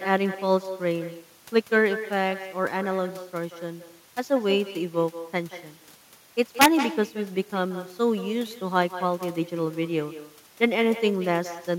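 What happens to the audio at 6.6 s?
A violent crack tears through the audio from 6.61 to 6.66 s: integer overflow, where peaks pushed about 3 dB past the limit wrapped to the opposite sign. Underneath, the echo with no canceller persists, a thinner copy about 13 dB quieter trailing roughly a fifth of a second behind the talker.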